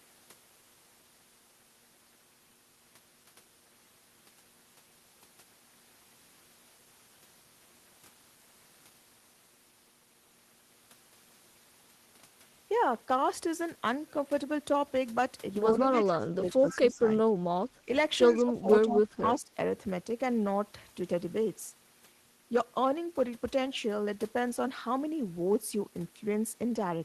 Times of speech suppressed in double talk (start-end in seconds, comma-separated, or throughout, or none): 15.73-17.31, 18.36-19.51